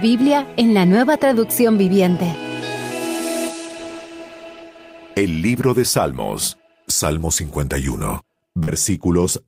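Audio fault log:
8.63–8.69 s, short concealed packet loss: about 40 ms never arrived and was patched by extending the preceding sound, leaving a brief smear rather than a silent gap or click.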